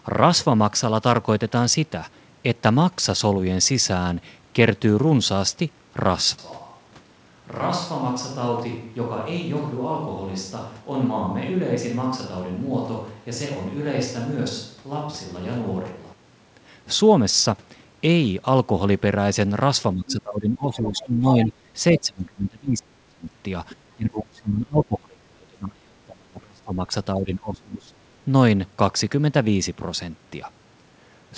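From 6.38 to 16.13 s the speech turns roomy and hollow, drops about 10 dB and picks up more background noise. That's a switch to a distant microphone, likely a far mic standing in for the close one. It cuts in and out abruptly.

Later, speech is suppressed in double talk across 19.94–21.51, 21.92–23.26, 23.73–26.92 and 27.14–28.07 s. The level dips by about 15 dB at first, then by as much as 30 dB. Both ends were likely talking at once, so the echo canceller turned the local talker down along with the echo.

Inside those stretches, the other side's voice leaks through in brief scraps at 20.08–20.13, 21.44–21.53 and 23.69–23.75 s. They sit roughly 15 dB below the speech, and the last one is quieter still. They're likely remnants of loudspeaker playback that the canceller missed.

Across the whole clip, nothing comes through above 8 kHz, which fits a wideband call codec such as G.722 on the call path.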